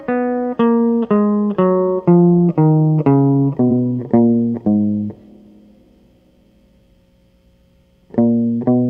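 At 3.67 s the music stutters with a repeated frames fault. A 46.4 ms block plays twice, which fits a single compressed frame being sent again, and the audio grows longer by that amount. The waveform shows an identical short segment back to back, and the spectrogram shows the same pattern copied side by side.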